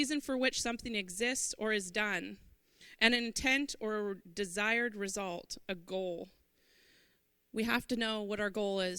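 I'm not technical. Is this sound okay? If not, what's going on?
Yes, no faults to hear.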